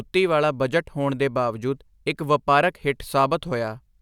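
Nothing stood out as a technical problem on listening to this speech recording.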